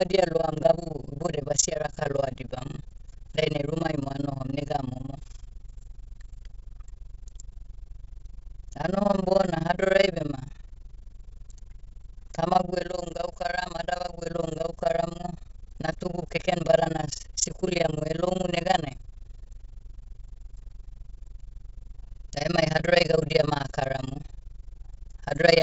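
Throughout the speech runs overlap-add ripple. The frames were rejoined with overlaps not summing to constant gain, so level dips by about 60 dB once per frame, around 20 times a second, giving a harsh fast flutter. The waveform shows regular deep notches, and the spectrogram evenly spaced vertical gaps up to the G.722 wideband ceiling near 7 kHz.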